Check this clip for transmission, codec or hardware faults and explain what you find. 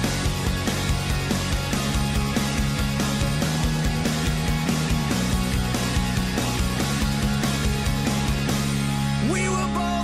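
No faults can be heard anywhere in the clip. Nothing in the sound calls for an explanation in terms of how it was carried, encoded or captured.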